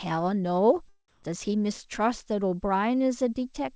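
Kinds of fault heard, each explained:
Comfort noise in place of the background: From 1.08 to 1.23 s, a span of 150 ms, the real background drops out. A steady, featureless hiss stands in for it. The level shifts by about 3 dB there. The background sits about 34 dB below the loudest speech. The likely cause is discontinuous transmission: the sender went silent and the receiver filled the gap with synthetic noise.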